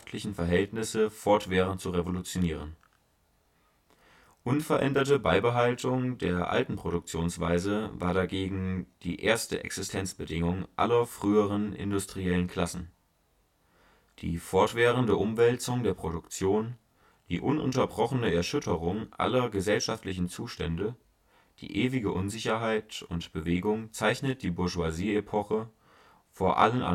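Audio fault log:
throughout: channel delay (comb filtering). One channel arrives late, by roughly 20 ms, and the two channels are then summed to mono, so the delayed copy lands on top of the original speech. Energy shared by both cancels at a series of evenly spaced frequencies, with the first notch down around 20 Hz and the rest packed closely above it. The result is a rough, slightly doubled sound to the speech across the whole clip.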